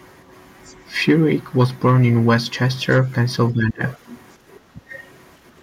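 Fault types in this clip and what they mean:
Other side's voice leaking through: at 0.64 to 0.75 s, 3.87 to 3.91 s and 4.89 to 5.09 s, a faint second voice sits roughly 20 to 30 dB under the talker, growing louder by the last scrap. This is likely loudspeaker echo that the canceller left in the microphone signal.
Speech suppressed in double talk: at 3.51 to 3.82 s the talker's level falls by roughly 20 dB, and at 4.75 to 4.81 s it briefly dips by only a few dB. Both sides were likely talking at once, so the echo canceller turned down the talker along with the echo.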